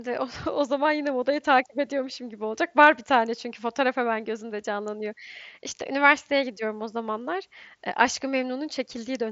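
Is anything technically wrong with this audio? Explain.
No, nothing technically wrong stands out in this speech.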